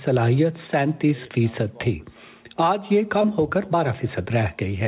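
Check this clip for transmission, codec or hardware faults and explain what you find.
One transmission fault is present. From 3.22 to 3.26 s there is short concealed packet loss: audio arrived too late for the decoder, which stretched the preceding sound to patch the gap before blending back. About 15 ms was filled this way and around 20 ms is simply missing, heard as a brief smear or wobble. The band-limiting to 4 kHz fits a G.711 A-law call path.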